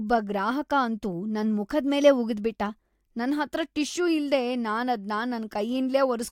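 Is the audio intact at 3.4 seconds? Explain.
Yes, at 3.4 seconds the speech plays through cleanly, with no dropout, click, distortion or other fault audible at that point.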